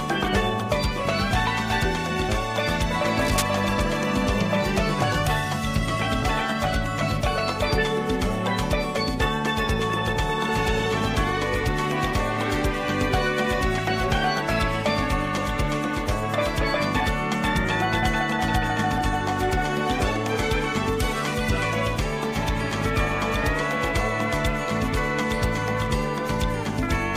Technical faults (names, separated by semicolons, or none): cable scratch noise